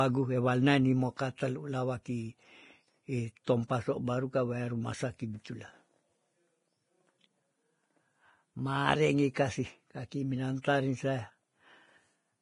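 The whole recording is hissy and grainy, with nothing above 10.6 kHz. This is heavy damage from likely Vorbis compression at a low rate, which fits roughly 29 kbps. The treble is quantised coarsely and turns to noise, roughening the speech.

Pre-echo appears at 1.17–1.19 s, 3.44–3.47 s, 9.34 s and 10.62–10.64 s. Each time, a short hiss of 18 to 30 ms comes just before a sharp attack. The codec spread its noise across a whole block, so the attack sounds smeared.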